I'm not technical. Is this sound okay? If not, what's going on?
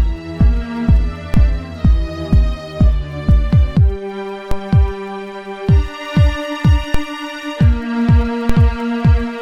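No, there's a problem. You'll hear a short, low thump at four moments: 1.34, 4.51, 6.94 and 8.5 seconds, with the last two a bit stronger. The sound itself carries on unaffected. Each thump is a DC step: the waveform's resting centre line suddenly jumps to a new level, like the floor shifting under it, and then drifts back over a fraction of a second. That sudden jump is what you hear as the thump.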